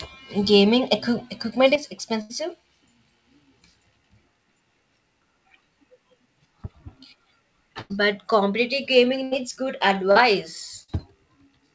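Short concealed packet loss at 0.58 to 0.61 s: about 20 ms of audio arrived too late, and the receiver extended the preceding sound to cover it, leaving a brief smear.

From 1.76 s to the end, the level of the centred sound falls abruptly by about 6 dB and stays there, likely because one channel drops out before the stereo pair is folded to mono.

A burst of packet loss at 2.21 to 2.31 s removes about 80 ms. The decoder continues the last sound and fades it, giving a held buzz or fading hiss before the audio resumes further on. The same happens at 7.81 to 7.92 s and at 9.24 to 9.33 s, each with about 80 ms missing.

Another short concealed packet loss at 10.11 to 10.17 s covers about 40 ms with extrapolated sound and is heard as a brief wobble.

A final burst of packet loss at 10.83 to 10.90 s drops about 40 ms, bridged by a quickly fading continuation. Across the clip, nothing is heard above 8 kHz, which fits a wideband call codec such as G.722.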